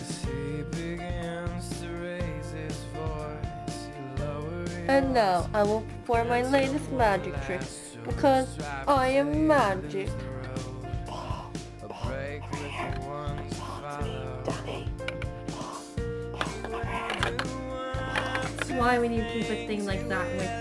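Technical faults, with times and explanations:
No technical faults can be heard anywhere in this clip. Nothing in the audio calls for a time stamp or an explanation.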